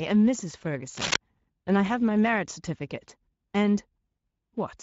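From the start the speech carries Speex codec damage: the excitation is starved of bits, so voicing turns hoarse and noisy, consistent with a setting near 16.8 kbps. On a spectrogram, harmonics look smeared and grainy rather than cleanly striated.

From 0.95 to 1.16 s, cable scratch noise cuts in, dense uneven crackling about as loud as the speech, most likely from a worn cable or connector being moved. The waveform shows a ragged cluster of spikes, and the spectrogram shows broadband vertical streaks.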